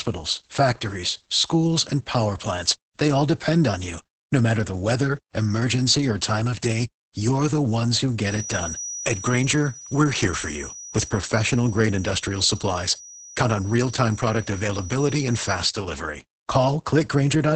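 From the start, the speech carries heavy Opus voice compression: the SILK coder is working hard, which fits a rate around 10 kbps, so nothing survives above 8.7 kHz and the coarse excitation coding leaves the voice muffled, hoarse and a bit robotic.

From 8.18 s to 15.71 s, a feedback whistle sits behind the speech, a thin steady tone at 5.8 kHz, well below the speech in level and slowly swelling and fading. It's likely a speaker-to-mic loop hovering right at the edge of feedback without taking off.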